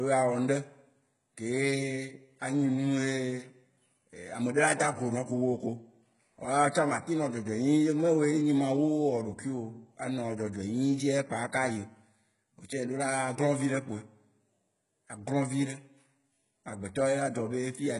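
From start to finish the speech carries heavy codec damage, likely HE-AAC compression at a bitrate that fits about 12 kbps. Nothing remains above 11 kHz, and the treble is rebuilt from copied lower bands, so harmonics misalign and sibilants sound gritty, metallic and lispy.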